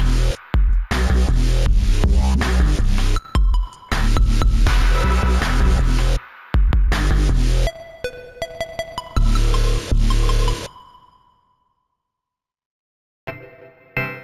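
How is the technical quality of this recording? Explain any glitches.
The recording carries one fault for its whole length: imaging from linear upsampling. The top of the band sounds dulled, and faint mirrored copies of the spectrum, roughly 30 dB down, fill 8 to 16 kHz. That fits audio raised from 16 kHz to 48 kHz by straight-line interpolation, a weak filter. It comes across as a light metallic shimmer on sibilant and bright sounds. Unlike aliasing, which folds content downward into odd inharmonic tones, these images sit above the original band edge as its mirror.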